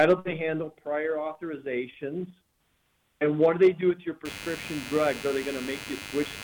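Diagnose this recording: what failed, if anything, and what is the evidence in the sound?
Computer activity noise entered at the analogue wiring stage, from 4.25 s to the end: a buzzing chirp pulsing at around 100 Hz, roughly 15 dB below the signal. Changing processor or graphics load disturbs the shared ground. A spectrogram shows evenly spaced vertical striations, and the waveform carries a periodic ripple unrelated to the sound.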